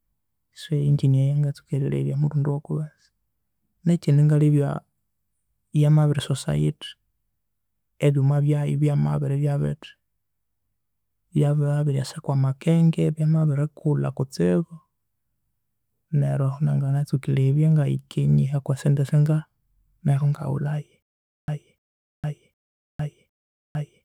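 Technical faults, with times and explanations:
21.02 s to end: stutter with silent gaps. From 21.02 s the speech stops moving forward, and the same fragment of about 0.3 s plays again four times, each followed by about 0.46 s of dead digital silence. The pattern repeats at an even 0.76 s period until the clip ends. The likely cause is a stalled player or stream: each retry replays the last buffered chunk and then runs dry, so the speech that should have followed is lost.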